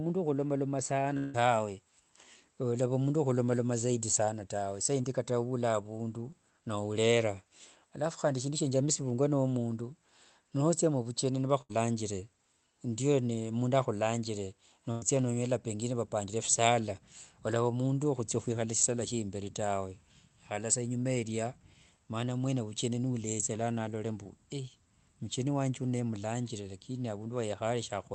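A speech recording that passed through a call path, with the top of the spectrum cut off around 8 kHz. At 1.17 to 1.36 s the signal was most likely interrupted by a long network dropout: about 160 ms of audio never arrived, and the receiver filled the whole gap by stretching the preceding sound into a fading buzz or hiss before the speech resumed further on, the skipped stretch gone for good. Short concealed packet loss occurs at 5.02 to 5.06 s, between "zaidi sana tawe saa" and "kata nula avundu nourera", and again at 24.24 to 24.27 s: each time about 20 ms failed to reach the decoder, which patched the hole from the last sound, leaving a brief smear. A burst of packet loss hits at 11.62 to 11.71 s, after "no omundu notsia muvucheni", and at 14.91 to 15.04 s, between "ndiyo mundu ahulanjire" and "nonyola pengine vapanjire visala". Roughly 80 ms and 100 ms went missing, and concealment held the prior sound as a decaying buzz or hiss before the speech jumped ahead.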